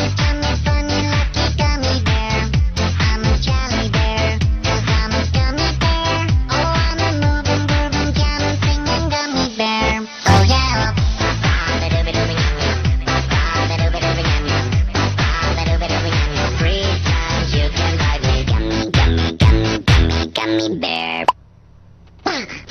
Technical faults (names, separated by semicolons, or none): none